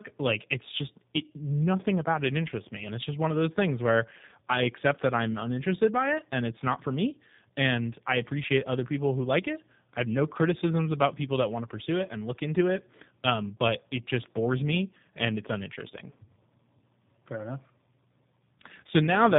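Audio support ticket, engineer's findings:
Tandem speech coding throughout. Rough, muffled, warbly speech, nothing above 3.8 kHz. Fits two low-rate codecs in series, likely AMR-NB then G.729A, the second re-coding the first's artefacts.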